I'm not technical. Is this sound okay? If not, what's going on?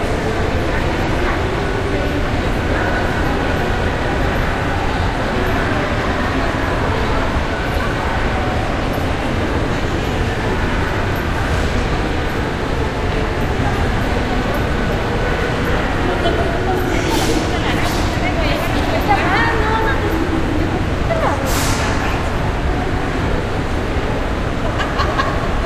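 No. There are two brief glitches: a quick chirp or blip at about 1.03 to 1.09 seconds, and another at about 23.22 to 23.28 seconds, each lasting only a fraction of a second. These come from damaged data in a compressed stream. A small piece of the stored file was corrupted, so the player couldn't read that moment correctly. It produced a burst of nonsense sound until it found its place again.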